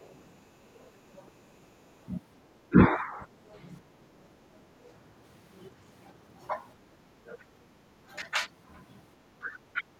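From 0.0 to 0.15 s and again from 0.75 to 1.3 s, the other side's voice leaks through. A faint second voice sits about 35 dB below the talker. It is likely loudspeaker echo the canceller failed to remove. A brief scrap returns at 4.87 to 4.92 s.

Between 2.69 and 3.21 s, the speech is suppressed in double talk. Both sides likely spoke at once, and the canceller turned the talker down with the echo. The voice dips by up to 20 dB for around a fifth of a second.

From 3.81 to 4.2 s, the background is gated by the echo canceller. The microphone was pulled down hard while the loudspeaker played. The room sound drops by about 12 dB for roughly 0.4 s, then comes back.

Speech suppression returns at 7.38 to 7.56 s, with dips of up to 20 dB over about a tenth of a second. It comes again at 9.38 to 9.86 s, cutting up to 30 dB for roughly 0.3 s.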